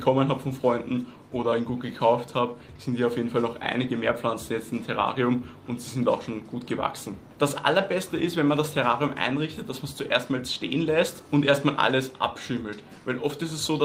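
Nothing goes wrong anywhere in this audio, so there's no technical fault to describe.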